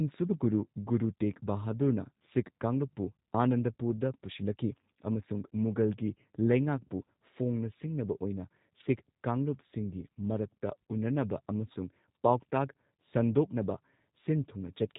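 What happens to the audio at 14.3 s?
At 14.3 s the speech carries G.729 codec damage, as it does throughout. The codec rebuilds each 10 ms frame from a vocal tract model, a pitch predictor and a few pulses. Nothing above 4 kHz survives. The voice sounds plainly rough and synthetic, which fits 8 kbit/s.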